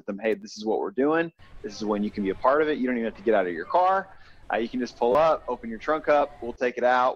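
Repeated buffers occur at 0.42 s and from 5.12 to 5.15 s, where fresh audio failed to reach the output in time and the device replayed its last block. The size points to a buffer of about 10 ms. At 0.42 s one extra play gives a brief click. At 5.12 s three extra plays make a short buzzy stutter with hard joins. Each repeat stands in for sound that is lost, roughly 10 ms at 0.42 s and 30 ms at 5.12 s.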